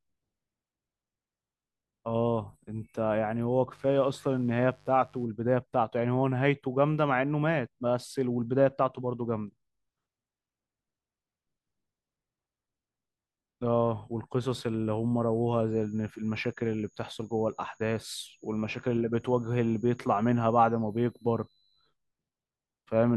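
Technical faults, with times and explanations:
3.69 to 5.27 s, mains buzz: a steady, raspy buzz sits well below the speech, built on 50 Hz and its harmonics reaching into the kilohertz range. Sharp switching spikes, twice per mains cycle, from a dimmer, rectifier or unshielded line produce that coarse edge.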